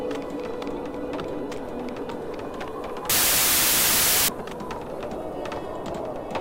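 From 3.10 to 4.28 s there's a wrong sample width fault. The stream sounds like packed 24-bit data being read as 16-bit, so bytes get mis-paired into loud hiss, with the real sound buried underneath, dragging at two-thirds speed and lower in pitch.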